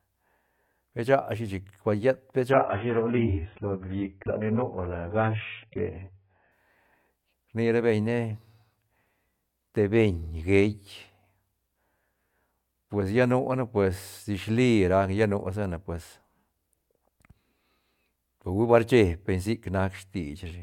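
From 2.52 s to 6.52 s the speech drops into a lower-bitrate version of the adaptive stream, the kind of switch a player makes when the connection slows. For those four seconds nothing is left above 3.7 kHz, and the dull, smeared sound points to a very low AAC bitrate, around 8 kbit/s. Unlike a dropout or packet loss, there is no gap or glitch: quality simply changes abruptly at both edges.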